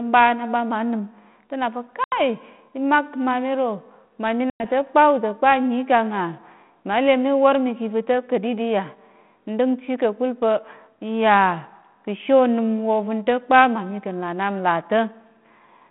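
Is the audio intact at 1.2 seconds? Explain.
Yes, the audio is intact at 1.2 seconds: nothing breaks, drops or distorts there, and the speech passes through the 32 kbit/s G.726 ADPCM telephone path, band-limited to about 150 Hz to 3.4 kHz, with only the light coding grain that path normally carries.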